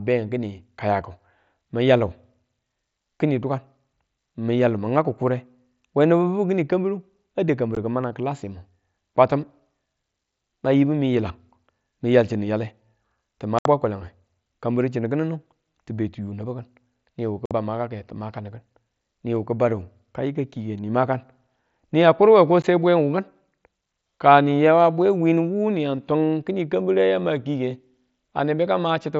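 At 7.75 s, 13.59–13.66 s, 17.46–17.51 s and 22.62 s, the speech drops into silence. This is unconcealed Bluetooth headset packet loss: lost frames between headset and phone leave abrupt holes of 15 to about 70 ms, under light mSBC grain, rather than the smoothed fill that concealment would give.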